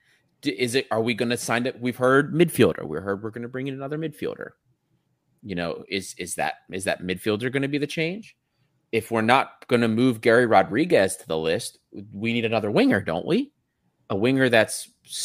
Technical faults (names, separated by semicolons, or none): none